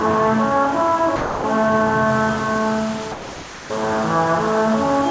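A recording of everyday sounds, heard through a call path that leaves nothing above 8 kHz, which fits a wideband G.722 link. Twice the sound gives way to steady, featureless hiss, from 1.16 to 1.44 s and again from 3.12 to 3.70 s. These are sound dropped by the voice detector, likely because the sender judged the sound to be background and the receiver filled the gap with comfort noise. Unlike a packet-loss dropout, the gap is smooth noise rather than a click or a garbled fragment. From 2.09 s to the end, a grainy distortion tracks the sound itself, with the error only about 20 dB below the signal, the sign of low bit depth without dither, likely around 5 bits with plain rounding. Unlike steady background hiss, this grit rises and falls with the sound and sputters away on the quietest parts.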